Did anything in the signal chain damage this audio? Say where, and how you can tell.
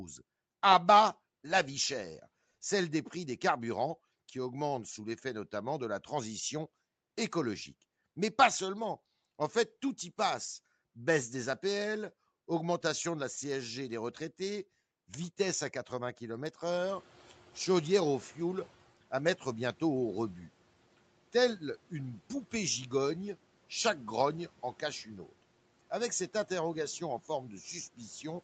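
Yes, in the call processing: a noise suppressor catching up. Room noise jumps around 16.5 s, and from 16.65 to 18.85 s it passes through with less reduction at first, then sinks about 10 dB over those 2.2 s as the noise estimate catches up, just before "à mettre bientôt au".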